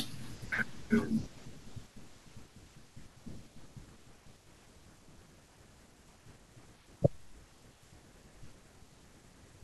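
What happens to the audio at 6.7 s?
At 6.7 s the speech carries on intact, with no dropout, click, distortion or other fault at that moment.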